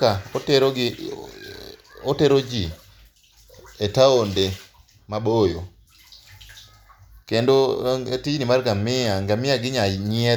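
No technical faults can be heard anywhere in the recording; the signal stays continuous and steady throughout.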